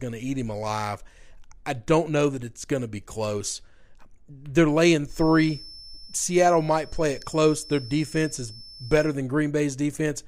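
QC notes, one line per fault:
5.03 to 9.18 s, feedback whistle: a thin, steady tone near 5.3 kHz sits around 20 dB below the speech, swelling and fading slowly in level. It is likely a loudspeaker-to-microphone loop held just at the point of feedback, unlike a fixed electrical tone, which would not waver.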